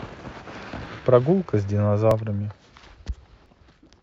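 At 0.86, 2.11 and 3.46 s the speech skips ahead, likely a dropped buffer (overrun).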